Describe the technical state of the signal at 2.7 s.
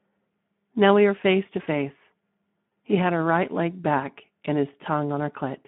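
The sound turns briefly buzzy and smeared, fading from 2.67 to 2.71 s: VoIP packet loss concealed by the speech codec, where the decoder extrapolates its last pitch and filter across about 40 ms of missing audio. Throughout, the audio is hoarse and noisy within a band of roughly 150 Hz to 3.5 kHz, plainly audible damage from the Speex codec whose starved excitation fits a low setting near 11 kbps.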